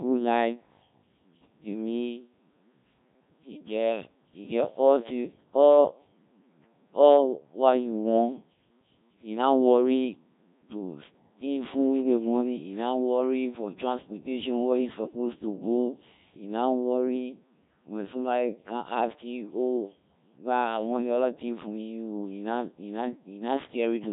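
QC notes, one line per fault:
Throughout, Codec 2 vocoder: the speech comes out robotic and buzzy for the whole clip, with heavy damage and a synthetic tone consistent with a very low rate, around 1.3 kbit/s. Only pitch, voicing, energy and a coarse spectral envelope survive, and the decoder rebuilds the voice from sine waves, so the original waveform is gone. Unlike a low-bitrate transform codec, there is no swirly or watery smearing, just a steady mechanical buzz.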